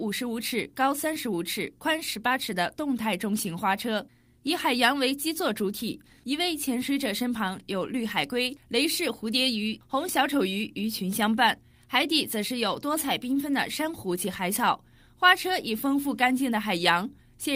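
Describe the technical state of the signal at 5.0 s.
At 5.0 s the signal is intact, with no audible technical fault at that point.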